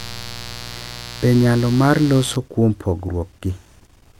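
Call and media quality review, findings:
Mains buzz, 0.0–2.36 s: steady raspy buzz under speech, roughly 15 dB down. Probable source is a dimmer, rectifier or unshielded lead admitting switching spikes twice per 60 Hz cycle, with harmonics reaching several kHz. Clears after 2.36 s.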